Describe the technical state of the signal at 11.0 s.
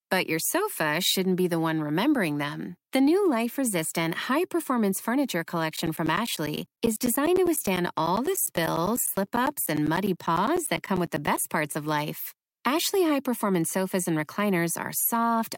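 At 11.0 s the signal falls within periodic USB or driver dropouts spanning 5.76 to 11.37 s. Every 0.1 s the audio path stalls and roughly 10 ms of speech is replaced by silence, producing a steady ticking, ten per second, through the speech.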